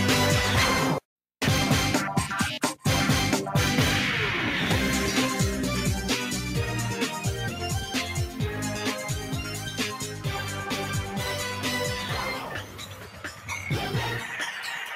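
Throughout the clip, a noise suppressor applied to music or sounds treats sustained material and ambience as noise, so the level swings by roughly 10 dB. Onsets pass while held tones and tails are pulled down, giving a pumping, thinned character that never settles. The processing is tuned for speech and keeps misjudging steady content as something to remove, which produces the unstable, breathing texture heard across the full length.

Sound cut by the noise suppressor appears three times. From 9.21 to 9.79 s the sustained part dips by about 5 dB. From 10.01 to 10.26 s it drops about 6 dB. The longest cut runs from 12.39 to 13.5 s, reaching about 7 dB down for around a second. In each case the steady or decaying portion sinks or its tail is shortened, while sharper attacks come through largely intact.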